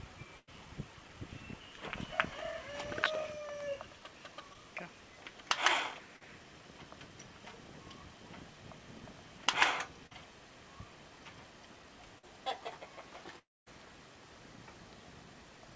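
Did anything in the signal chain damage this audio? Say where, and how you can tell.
Yes. Network stage, burst of packet loss at 0.38 to 0.49 s. About 100 ms went missing. The last sound was stretched and faded, and the audio resumes later.

Short concealed packet loss at 4.53, 6.16, 10.07 and 12.18 s. Each gap of 20 to 40 ms was patched from the preceding sound, leaving brief smears.

Long network dropout from 13.39 to 13.68 s. A short fading tail gives way to about 230 ms of silence. Roughly 280 ms is gone, likely lost in transit.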